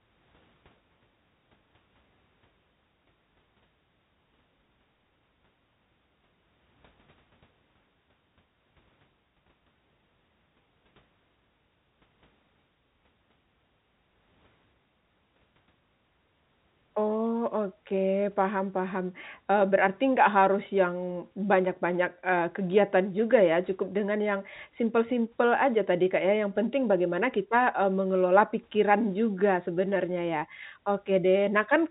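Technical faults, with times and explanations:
No faults found in this speech; the G.711 telephone coding path behaves as expected, with nothing passing above 4 kHz and only a faint level-following quantisation noise, consistent with 64 kbps mu-law.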